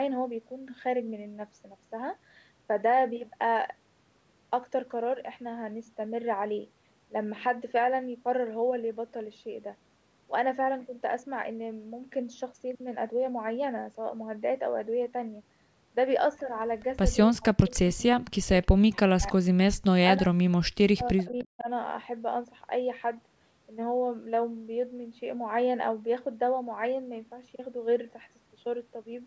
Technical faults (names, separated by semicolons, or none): speech suppressed in double talk; echo leak